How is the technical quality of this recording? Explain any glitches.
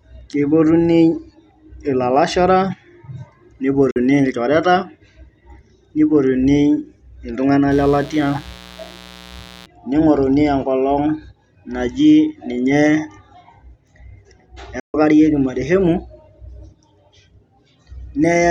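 The recording has two kinds of fault: two short silences and a stretch of buzz.

At 3.91 s and again from 14.80 to 14.94 s, the speech drops to silence for about 46 ms and then about 139 ms. This is most likely a Bluetooth dropout, where packets reach the headphones too late and are discarded, leaving a hole until valid data arrives. The speech resumes further along, as if it kept playing underneath. That lost time separates them from an edit cut or a stutter, and the lengths fit a couple of lost packets for the first and several for the second.

From 7.71 to 9.66 s a mains buzz sits under the speech at about 25 dB below it, built on 60 Hz. Sharp switching spikes from something like a dimmer or rectifier enter the signal twice per mains cycle, spreading harmonics well up into the kilohertz range. It therefore sounds steady and raspy rather than like the smooth, low tone of plain hum, which has little energy above the first few harmonics.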